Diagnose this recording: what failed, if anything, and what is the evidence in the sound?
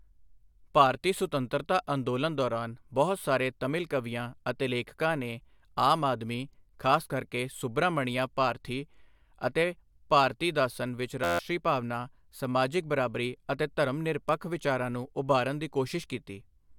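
System hang loop at the driver or buffer stage: from 11.24 to 11.39 s, after "ਅਤੇ ਭਾਰਤੀਦਾਸਨ ਵਿੱਚ", an 11.61 ms slice repeats exactly 13 times, a steady 86.1 Hz buzz that fits a frozen 512-sample ring buffer. Unlike codec concealment, the repeats never vary. About 150 ms is lost.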